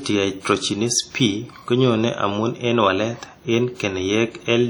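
Speech throughout, with heavy WMA compression: ringing, washy smearing and hiss that breathes with the voice, likely from a low-bitrate encode around 32 kbps.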